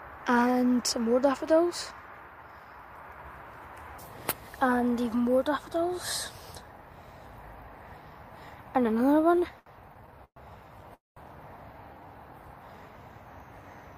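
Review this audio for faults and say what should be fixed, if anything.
From 9.21 to 10.38 s the audio shows repeated stalls (stutter): eleven short breaks, the longest 119 ms, where the last sound is stretched while late packets catch up. About a quarter of that stretch is filler, so it drags rather than dropping anything. A jitter buffer that adapts its depth to the arrival rate would stop these stalls.

At 10.94 s a single call audio freeze lasts about 0.22 s. The last sound carries on briefly, then about 170 ms of near silence follows before playback resumes where it stopped. Unlike the stutter, this is one long break, likely from packets held up in transit and emptying the jitter buffer. Packet-priority rules (QoS) on the network path would prevent such a hold-up.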